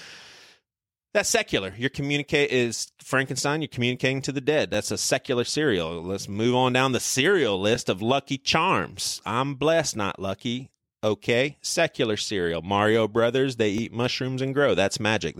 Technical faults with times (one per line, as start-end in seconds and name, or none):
1.73 overlapping chunks
4.74 overlapping chunks
7.76 overlapping chunks
10.77 overlapping chunks
13.78 overlapping chunks